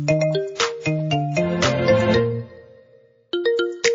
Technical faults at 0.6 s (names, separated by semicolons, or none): MP3 compression; pre-echo